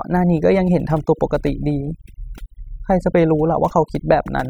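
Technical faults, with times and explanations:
Throughout, overdone noise removal: aggressive noise reduction pulls bands near the noise estimate far down, leaving a lowered background that breaks up into twinkling specks.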